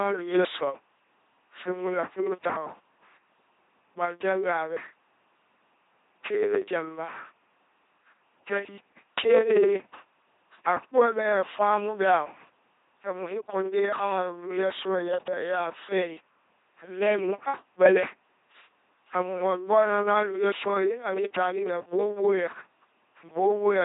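Throughout, an LPC-10 vocoder, consistent with 2.4 kbit/s, rebuilds the speech from pulses or noise, giving harsh robotic buzz, rigid harmonic stripes, and nothing above 3.8 kHz.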